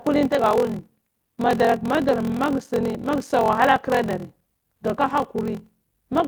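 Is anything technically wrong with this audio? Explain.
Yes. There is a block size mismatch (padded) throughout this speech clip. One stage writes blocks shorter than the next stage reads, which fits a 1024-sample read. Zeros fill each shortfall. This causes a buzz at about 43.1 Hz, and the speech plays at 0.861 times normal speed with roughly normal pitch. The Opus compression is also audible, but only lightly, and content reaches fullband.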